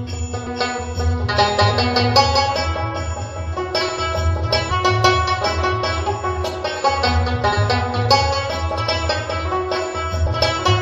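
Compressed frames were skipped, either missing or rejected by the decoder, so the audio jumps ahead in steps that fit a 23.2 ms frame. At 0.45 and 4.70 s roughly 300 ms vanishes, at 7.51 s about 150 ms, and at 10.25–10.27 s about 100 ms.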